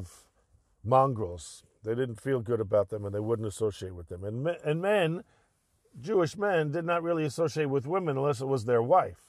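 Speech recording with no audible technical faults.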